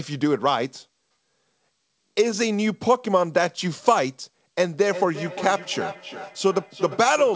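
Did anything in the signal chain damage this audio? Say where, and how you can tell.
Yes. At the call-processing stage, a feedback echo between two devices starts at 4.72 s and runs to the end at 7.35 s. A second device in the room replays this microphone's audio, which gets picked up again outside the echo canceller's reach. Each phrase returns roughly every 0.4 s, thinner and ringing, at about 11 dB below the speech.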